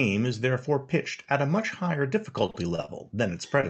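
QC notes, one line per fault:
2.41–3.15 s: repeated packet loss (robotic sound), eight short gaps, the longest about 35 ms, each patched by extending the previous sound, giving choppy speech.
3.61 s: short concealed packet loss, roughly 20 ms missing, filled by continuing the last sound then blending back, heard as a brief smear or wobble.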